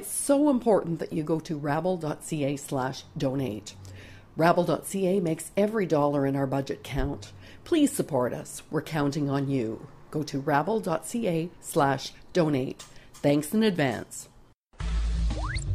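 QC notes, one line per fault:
No faults found.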